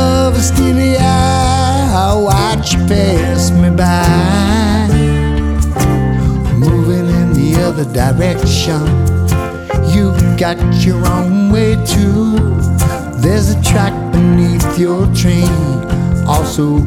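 No technical faults can be heard anywhere in this recording.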